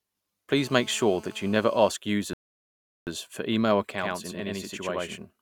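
From 0.57 to 1.90 s there's GSM phone buzz: a nearby 2G phone on a call is pulsing its transmitter about 217 times a second, and the audio circuitry rectifies those bursts. You get a hard, raspy 217 Hz buzz full of harmonics, nearly steady and sitting about 24 dB under the speech.

Then at 2.33 s there's a rebuffering stall. The player ran dry of downloaded audio, so the speech cuts to dead silence until 3.07 s and then picks up exactly where it left off. Nothing's missing, but about 735 ms of extra time gets inserted.

From 3.92 s to the end, it's channel delay (doubling). One channel runs about 93 ms behind the other, which fits a 4096-sample buffer, and once they're summed to mono that late copy stands out at equal level as a distinct slapback doubling of the speech.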